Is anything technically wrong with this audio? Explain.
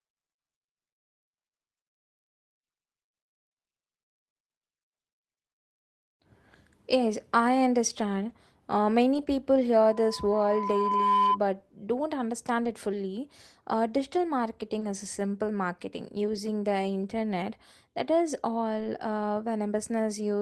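Yes. Three kinds of fault are audible.

Lost packets were rebuilt from error correction at 8.29 s, 9.13 to 9.27 s, 12.65 s, 14.81 s, 16.35 s (just after "is a simple marketing") and 18.79 to 18.85 s. The next packet carried a low-bitrate copy, so nothing drops out. Those 20 to 80 ms stretches just sound rougher and noisier.

A loudspeaker feedback squeal runs from 9.89 to 11.39 s. The microphone hears its own loudspeaker, and the loop gain tops one at 1 kHz. That steady tone swells over about a second. It ends up somewhat louder than the speech.

Short concealed packet loss hits at 12.63 s, just before "it fully", and at 14.79 s, just before "is a simple marketing". Each time, 20 ms never arrived. The decoder stretched the preceding sound to fill the hole, then blended back. The result is a brief smear or wobble.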